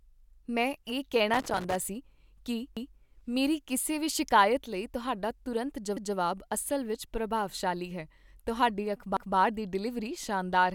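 An irregular burst of crackle and scratching breaks through the speech from 1.34 to 1.75 s. This is loose connector crackle: a worn or dirty contact in the cable path keeps making and breaking as it shifts, chopping the signal.

From 2.77 s a short stutter appears, and it comes back at 5.97 s and 9.17 s, spaced exactly 3.2 s apart. These are overlapping chunks. The audio was handled in 3-second chunks, and each chunk started 200 ms before the previous one finished, so a 200 ms piece plays twice at every join.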